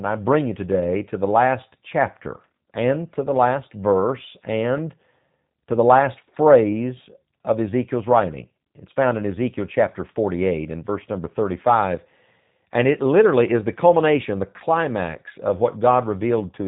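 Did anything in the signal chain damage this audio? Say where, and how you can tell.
Yes. The speech sounds rough and synthetic throughout, with the codec damage plainly audible, and nothing passes above about 3.8 kHz. The damage comes from the codec stage: a G.729 codec, most plausibly the G.729A variant, whose output fits an 8 kbit/s stream. G.729 does not send the waveform. It sends a vocal tract filter, a pitch predictor and a few pulses per 10 ms frame, and the decoder rebuilds the speech from these parameters alone.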